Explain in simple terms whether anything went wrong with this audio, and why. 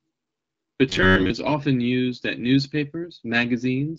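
From 0.89 to 1.32 s the speech becomes a rigid, metallic buzz near 94 Hz. This is robotic sound from repeated short buffers, likely from late audio being patched with replayed 11 ms snippets.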